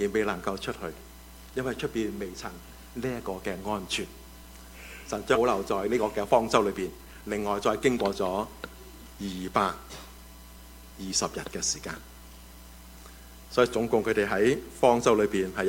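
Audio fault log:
5.35 s, skip ahead: roughly half a second of audio is missing, dropped in transit or by an overflowing jitter buffer, and playback jumps forward with no fill across the join.
5.72–8.05 s, jitter buffer speed-up: the receiver trimmed short pitch-period pieces repeatedly to drain excess buffered delay, removing about 0.3 s, so audio runs at 111% speed without a pitch change.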